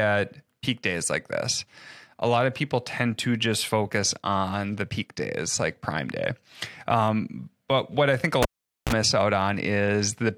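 Right after "what I think a", at 8.42 s, the cable gets pulled and plugged in. There's a pop, then about 0.45 s of near silence, a quick 35 ms burst of 60 Hz mains buzz as the tip makes contact, and another pop as the sound returns by 8.93 s.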